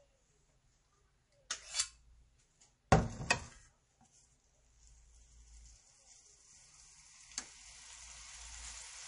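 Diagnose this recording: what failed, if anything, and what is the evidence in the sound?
Codec stage, throughout the clip. Nothing sounds above 10.6 kHz, and the audio is audibly watery. Likely MP3 compression, consistent with a starved bitrate near 40 kbps.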